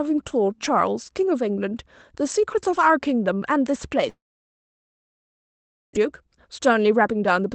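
Speech over a call path whose top end stops near 8 kHz. From 4.09 to 5.97 s the sound decays into a brief fading buzz and then near-silence for about 1.75 s, and roughly a second of speech never returns, likely a long network dropout. From 6.05 to 7.47 s the speech runs about 9% fast at unchanged pitch, a jitter buffer speed-up trimming pitch-period slices to shed around 150 ms of backlog.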